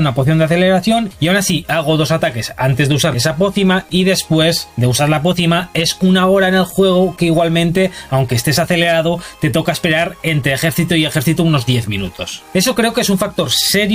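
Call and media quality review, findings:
No dropouts, glitches or level problems turned up anywhere in this recording, so there's nothing to log against it.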